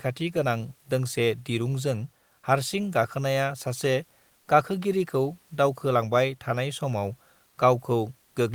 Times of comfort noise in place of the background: 4.39-4.47

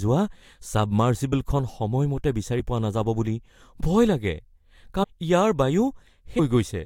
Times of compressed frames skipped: 1.32, 3.79, 5.02-5.05, 6.38

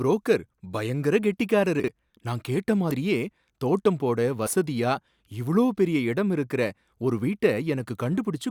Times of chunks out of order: 1.80-1.88

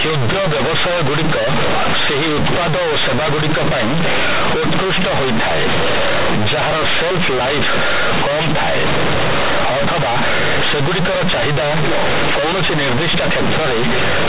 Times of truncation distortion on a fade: none

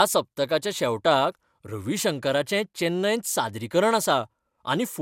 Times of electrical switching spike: none

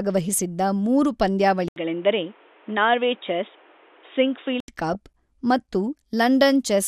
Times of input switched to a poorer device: 1.68-4.68

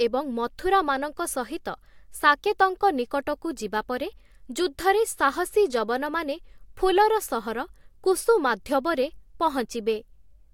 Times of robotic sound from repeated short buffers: none

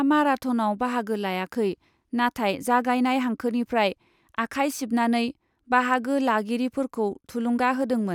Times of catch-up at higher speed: none

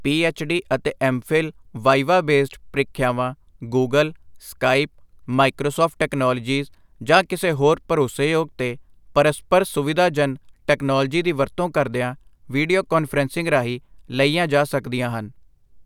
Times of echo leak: none

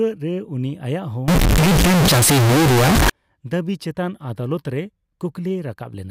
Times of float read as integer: 1.28-3.10

